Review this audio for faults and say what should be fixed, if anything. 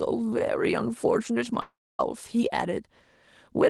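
From 1.61 to 2.01 s the speech breaks off in what is likely a long network dropout. The last sound is stretched into a fading buzz, then about 0.27 s of near silence follows, and the speech resumes with roughly 0.38 s of content gone. A short packet-loss glitch would be smoothed over within tens of milliseconds. A simple mute or level drop would have no synthetic tail and would lose nothing. Prevent it with a more robust network path and Opus in-band FEC or redundancy.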